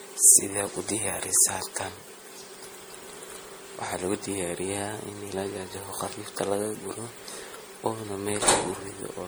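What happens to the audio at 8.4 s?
At 8.4 s the speech carries generation loss, which runs through the whole clip rather than starting there. It sounds swirly, smeared and hollow, and consonant attacks are blurred. The likely cause is repeated lossy encoding, about four passes, in a way that fits MP3 at 64 kbit/s. Each pass quantises on a shifted frame grid, so noise and spectral holes accumulate. A single low-bitrate encode would sound thinner but cleaner. The content still extends up to 20.8 kHz, so this is not bandwidth loss.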